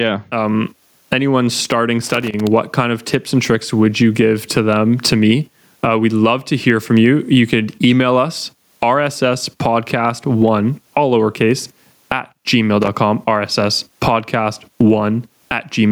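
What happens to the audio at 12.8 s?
A burst of loose connector crackle runs from 12.82 to 12.88 s, just after "one all lowercase at". A dirty contact making and breaking chops the signal into scratchy clicks. Gain pumping also continues through this moment. The gain is likely set far too high, so a fast limiter swings the level by around 25 dB.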